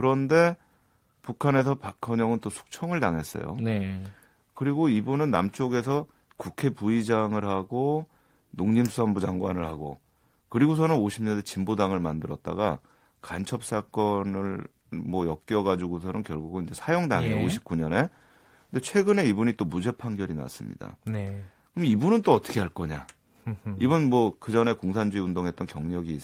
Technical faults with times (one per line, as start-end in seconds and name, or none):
none